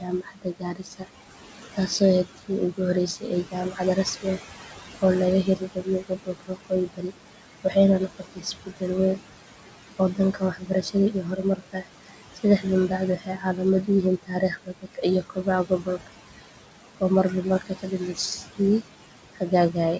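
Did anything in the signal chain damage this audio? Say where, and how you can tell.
Yes. Noise suppressor artifacts from the call processing stage: the background is pulled down about 18 dB between phrases and swells back under speech. A spectrogram shows flickering, patchy noise bands.

Speech cut by the noise suppressor, also in call processing: parts of the speech are mistaken for noise and dropped about 17 to 19 dB at 0–1.29, 1.73–2.8, 3.16–5.03, 5.44–7.76, 8.08–8.83, 9.59–13.88 and 14.19 s to the end. The waveform shows parts of the speech sinking with the background in those stretches.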